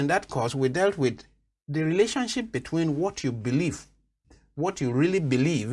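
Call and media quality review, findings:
Nothing stood out on listening to this recording.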